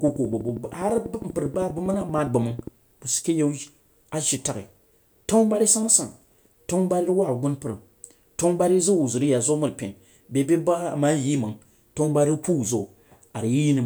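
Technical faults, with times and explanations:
0.08–2.68 s: train of clicks, about thirty similar pulses ticking at a regular 12.3 per second, peaking about 5 dB above the sound before "sid ke"; likely interference pickup.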